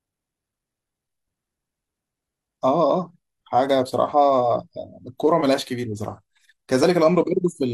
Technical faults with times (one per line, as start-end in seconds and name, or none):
6.83-6.86 overlap between stream segments